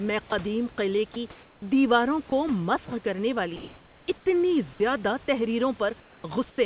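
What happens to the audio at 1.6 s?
Just before 1.6 s the background has turned into a flat, featureless hiss, about 1 dB quieter than the real room noise it replaces, running from 1.32 to 1.62 s. This is comfort noise in place of the background, likely because the sender's voice detector judged the gap silent and stopped transmitting. The receiver then filled those 300 ms with synthetic noise roughly matched to the room's level and colour, losing its natural detail.

At 1.60–1.62 s the sound entering on "دیواروں کو" begins abruptly, its soft start missing. This is an onset clipped by the voice detector, which was likely slow to register that sound had resumed. The first 20 ms were never sent, and the receiver kept playing comfort noise through them, so the sound seems to switch on hard rather than rise naturally out of the background.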